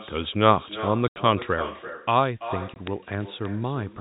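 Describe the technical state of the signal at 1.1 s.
At 1.1 s the signal shows packet loss filled with silence: roughly 80 ms of audio, from 1.08 to 1.16 s, was lost in transit and replaced by silence, which fits four 20 ms packets. The sound drops out abruptly, with hard edges.

Word clock ticks run across this moment, from 0.17 to 3.94 s. A receiving device on its own clock, off by a couple of hundred parts per million, drops or repeats one sample at a time, giving sharp ticks about ten times a second, around forty in all.

The far end also has echo with no canceller: its loudspeaker feeds its microphone, so a thinner copy about 13 dB down returns roughly 0.3 s behind the speech.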